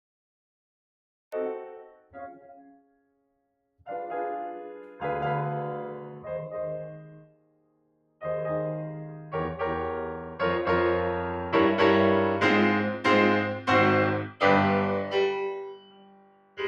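The music opens on digital silence, then enters abruptly at 1.32 s mid-sound with no attack; this cut-off start means the recording began late.

Throughout, held notes and tails pump and thin, swinging by around 20 dB, because a noise suppressor built for speech was applied to music and treats sustained tone as noise.

Sustained passages sink by about 20 dB from 1.64 to 3.88 s, 7.0 to 8.23 s and 15.53 to 16.61 s, and by about 19 dB from 14.24 to 14.43 s. In each, the sound is cut by the noise suppressor, which mistook steady content for noise.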